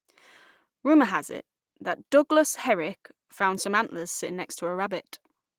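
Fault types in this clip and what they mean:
No faults present; the speech carries only the light softening expected of Opus voice coding in hybrid mode, with the full band kept.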